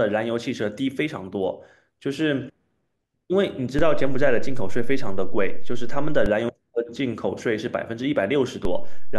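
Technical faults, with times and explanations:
3.79–6.26 s and 8.65 s to the end, DC step: the waveform's zero line jumps by about −15 dBFS, then about −16 dBFS, as an offset switches in. Each jump thumps, a brief low-frequency vertical stripe on a spectrogram, while the speech rides unchanged on the shifted baseline.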